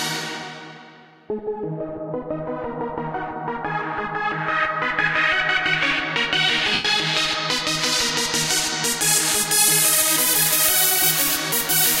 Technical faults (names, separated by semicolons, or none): lost LE Audio frames